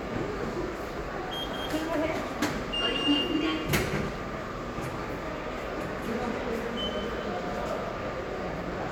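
No audible technical faults.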